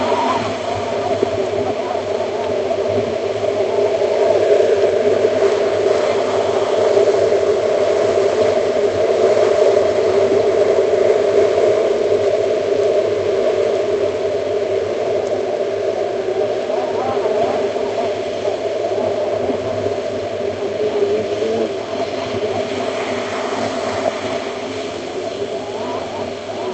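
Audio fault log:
No fault is heard in this clip of sounds.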